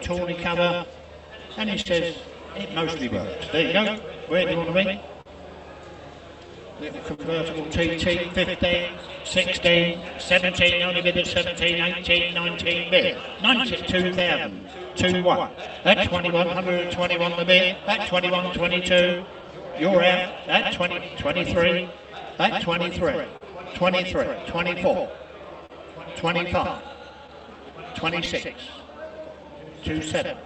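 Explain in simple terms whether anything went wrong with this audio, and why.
Yes, several things went wrong, and most of them are linked to how the sound travelled over a call connection.

The first is a doubled audio track. A second copy of the whole sound plays about a tenth of a second behind the original, all through the clip. The copy is only a little quieter. It has no echo tail or room sound, so it is not a real room echo. The likely cause is that the sound was picked up a second time through a slower route and mixed back in.

The second is clock drift between sender and receiver. The sending device's clock ran roughly 3% slower than the receiving one. So sound arrived a bit too slowly for the receiver. Its small holding area kept running low. That pushed it into constant small fixes. The small stumbles this causes are spread across the whole clip.

Those fixes are the repeated timing corrections. 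From 0.15 s to 30.33 s the receiver keeps stretching the sound with tiny repeated pieces. Overall the playback runs at about 99% speed. All of this adds roughly four tenths of a second to the clip. Each edit is tiny and unevenly spaced. You may notice only a faintly unsteady pace or the odd slight hiccup.

There is also a short stall from a late packet. At 1.81 s one piece of sound arrived late. The receiver held the last sound for 44 ms until it came. Then it carried on from the same place. Nothing is lost. There is just one moment where a sound is drawn out too long, with a slight buzz or dip.

Last, there are scattered short gaps. Between 3.73 s and 5.29 s there are about three of them. From 7.14 s to 30.09 s there are around forty more. None is longer than about 40 ms. Each small hole was patched by stretching the sound just before it. Nothing is actually missing. But you hear brief ticks, smears or little hiccups dotted through the audio.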